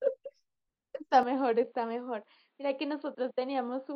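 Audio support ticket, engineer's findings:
Input switched to a poorer device, 1.23 s to end: speech abruptly dull and boxy, nothing above 4.6 kHz, no gap at the change. Level drops about 5 dB, new noise floor roughly 45 dB down. Likely capture moved to a narrower-band microphone or headset call profile.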